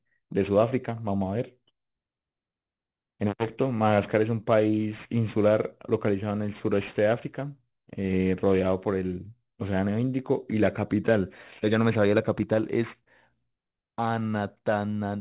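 Sibilants throughout sound gritty and metallic, with stray tones unrelated to the speech and energy running up to 4 kHz. This is aliasing: the rate was lowered, fitting a drop to 8 kHz, without filtering, so content above 4 kHz folded back about 25 dB below the speech.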